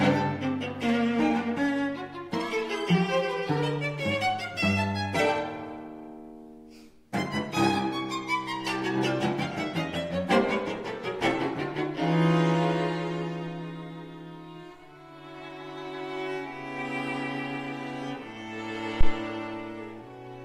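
At 19.01 s a phantom power thump, a supply step passing through the coupling capacitors, sounds as a deep thump peaking about -8 dBFS. It shows as a low-frequency waveform swing and a bottom-band spectrogram smear, decaying within 28 ms.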